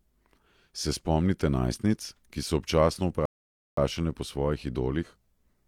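A speech clip with a rebuffering stall from 3.25 to 3.77 s, right after "najstnic ki so občasno": playback halts in silence for about 0.52 s, then resumes exactly where it stopped.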